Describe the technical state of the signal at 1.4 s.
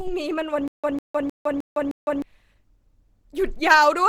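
Stutter with silent gaps from 0.68 to 2.22 s: a 0.15 s fragment repeats five times, each followed by about 0.16 s of digital silence, as a stalled stream likely replays its last buffer.

Opus compression also runs throughout. It is plainly audible as a muffled, hoarse, grainy texture that fits a hybrid-mode encode at a low bitrate of around 16 kbps.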